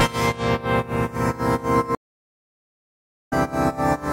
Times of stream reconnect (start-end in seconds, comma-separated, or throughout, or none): 1.95-3.33